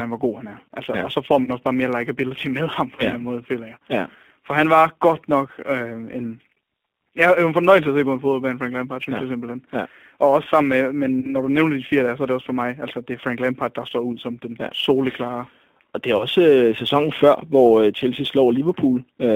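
Throughout, the speech runs through a G.729 codec at 8 kbit/s, which rebuilds it from a vocal tract filter, a pitch predictor and a few pulses per frame. The line is held to about 200 Hz to 3.5 kHz, and the coding damage is plainly audible as a thin, slightly rough, synthetic quality.

Also throughout, sample clock jitter of a few microseconds makes the converter sample a little early or late at random. Errors sit roughly 35 dB below the signal and rise on loud, bright stretches as a fine hiss or grit, disappearing in the pauses.

Four times, VoIP packets are lost and the speech codec conceals the gap by extrapolating from its last pitch and filter while lowering the gain:

1. From 1.44 to 1.50 s, after "så får" and before "også bare mere likability", about 30 ms of audio is missing.
2. From 2.96 to 3.03 s, just after "mere likability med ham", about 20 ms is missing.
3. From 11.20 to 11.35 s, between "også sammen med" and "når du nævner de", about 30 ms is missing.
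4. From 16.17 to 16.26 s, about 30 ms is missing.

Each gap is smeared into a brief buzzy tone or coloured noise that fades, and the speech stays weakened or distorted for a moment after it resumes.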